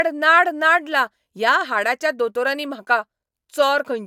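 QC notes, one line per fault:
No fault found in this speech clip.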